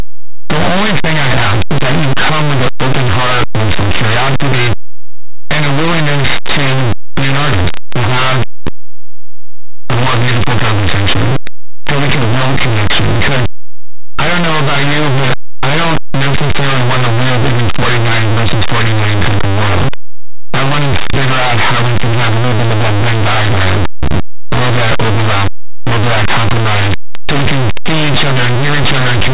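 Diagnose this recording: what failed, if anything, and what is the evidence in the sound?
Harsh, very loud distortion runs through the entire speech clip, and even quiet moments blare. This is linear audio read as companded, a sample-format conversion fault: linear 8-bit samples were expanded as mu-law codes, so small values on one side of zero became maximum outputs.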